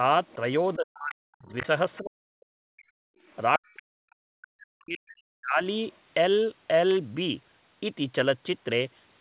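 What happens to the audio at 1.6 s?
Around 1.6 s, the end of a suppression span runs from 0.75 s to 1.64 s. The speech dips in pieces, falling by roughly 40 dB at its deepest. This is speech suppressed in double talk, likely because the echo canceller turned down the talker along with the far end. From 1.58 s to 1.66 s, the other side's voice leaks through as a brief scrap about 15 dB below the speech. That is likely residual loudspeaker echo the canceller missed.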